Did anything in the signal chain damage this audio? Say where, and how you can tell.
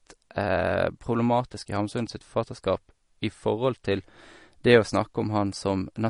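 Yes. Throughout the speech the sound is watery and swirly, with chirpy s sounds and nothing above 10.5 kHz. That points to the codec stage, likely MP3 compression at a low bitrate around 40 kbps, cutting the treble and zeroing weak frequency lines frame by frame.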